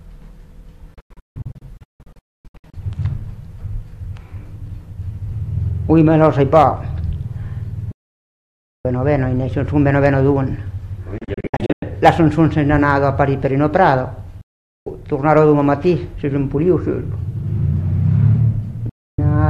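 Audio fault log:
0.94–2.74 s, digital broadcast dropout: about 1.1 s of audio is muted in scattered holes across 1.8 s, the longest 256 ms. Each hole opens with a 3 ms fade, the receiver muting on failed frames.
5.98–6.65 s, hard clipping: peaks are driven about 3 dB past full scale and cut flat, adding high harmonics heard as crackle on the loudest moments.
7.92–8.85 s, digital broadcast dropout: a single continuous mute of about 0.93 s with a 3 ms fade in and out. Lost audio is not recovered, and the hole lengths fit 32 ms frames.
11.18–11.83 s, digital broadcast dropout: 352 ms muted in short holes spread over 640 ms, the longest 96 ms.
12.05–12.09 s, hard clipping: a brief overload about 6 dB past the limit gives a sharp flat-topped crack.
14.41–14.87 s, digital broadcast dropout: 448 ms of sound cut to silence via a 3 ms fade.
15.31–15.39 s, hard clipping: a mild overload of about 1 dB flattens only the tips of the peaks, heard as a tick.
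18.89–19.19 s, digital broadcast dropout: a final mute of 288 ms, faded in 3 ms.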